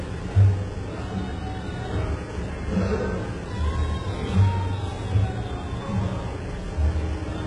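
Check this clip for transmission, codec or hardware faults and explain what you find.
There's one problem running through the whole clip, and it sounds like HE-AAC compression at a very low bitrate, something like 12 kbps. Throughout, the treble is likely rebuilt by band replication from lower bands, so it sounds gritty and metallic, with nothing above 11 kHz.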